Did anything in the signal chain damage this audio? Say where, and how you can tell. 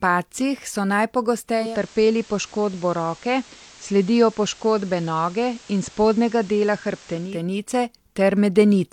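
Yes, at the receiver. A digital radio blending to analogue runs from 1.50 s to 7.46 s. The set lost its digital stream and spent 342 ms cross-fading to the FM broadcast. Hiss rises to roughly 25 dB under the speech, though the level holds steady.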